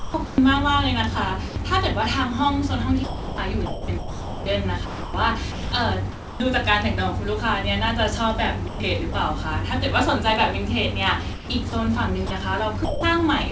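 Speech here, and it's been through a call path where the voice detector keeps getting in the way. You hear sound chopped by the voice detector at 0.0–0.38 s, 3.04–6.40 s, 8.68–9.14 s and 11.33–11.73 s. Inside each stretch the detector likely flipped between sending and muting, so softer syllables and word edges get swapped for comfort noise, about 259 ms, 1.8 s, 140 ms and 200 ms of it respectively. There's also sound dropped by the voice detector at 1.48–1.56 s, 12.27–12.31 s and 12.85–13.03 s. Those are single cut-outs of 80, 40 and 180 ms where the speech just gives way to steady noise and then comes back. The likely cause is the sender deciding a quiet bit was background and briefly stopping transmission. The top end stops at 8 kHz, which fits a wideband codec like G.722, and there's a bit of room noise sitting about 33 dB under the speech.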